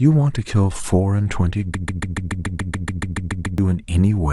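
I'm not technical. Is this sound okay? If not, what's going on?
No. From 1.75 to 3.58 s the speech stutters, one 0.14-second snippet repeating 13 times: a broken-record loop, likely from playback stalling and resending the last piece.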